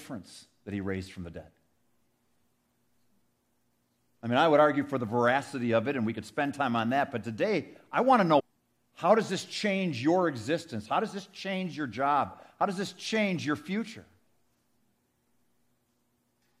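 At 8.38 to 8.41 s, just after "today I want to", the speech jumps forward abruptly. A brief blip sits at the join, lasting about 24 ms. The sentence does not continue smoothly from that point. A piece of the programme seems to be absent. This is likely a stream segment skipped. One segment of the segmented stream failed to load, and the player carried on with the next segment. That leaves a gap in the content and a small click at the splice.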